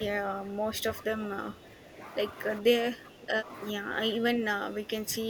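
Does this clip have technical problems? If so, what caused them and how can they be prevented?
Yes. Speech suppressed in double talk occurs at 0.06–0.83, 1.02–1.31, 1.48–1.99, 2.60–2.73, 2.91–3.48, 3.76–3.93 and 4.15 s to the end. In these stretches the speech sinks by roughly 10 dB (about 5 dB at 1.02–1.31), and by up to about 15 dB in the final stretch. On a waveform these show as shrunken envelopes, and on a spectrogram as faded energy, especially in the upper bands. The likely cause is an echo canceller that could not separate this side's talk from the far end's loudspeaker echo while both played, and turned down both. Better double-talk detection, with gentler suppression while both sides speak, would prevent it.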